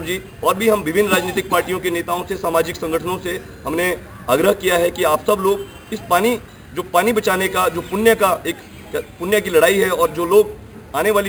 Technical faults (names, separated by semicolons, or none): imaging from sample-and-hold upsampling